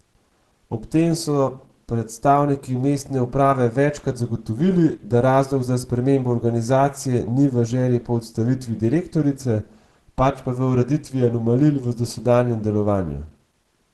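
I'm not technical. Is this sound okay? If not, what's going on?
No, the speech sounds plainly muffled and hoarse throughout, with nothing above about 12 kHz, likely from Opus compression squeezing it into a small file.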